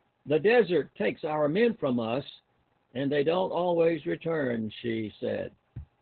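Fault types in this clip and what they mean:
Opus voice compression: Speech squeezed into narrowband linear-prediction coding at a rate that points to about 8 kbps. Nothing survives above 4.3 kHz. Sound is muffled, hoarse and slightly robotic.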